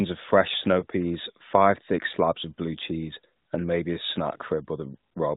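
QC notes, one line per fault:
0.80–0.85 s, lost AMR speech frame: just after "of fresh" and before "peas five thick slabs", a single 20 ms frame drops out, heard as a brief dip or warble. The decoder fills the gap by reusing the previous good frame's pitch and vocal tract settings at reduced gain, so the sound smears rather than cutting to silence.
throughout, AMR narrowband mobile codec: the band-limited codec at its 12.2 kbps mode leaves light codec damage, with nothing above 4 kHz passing.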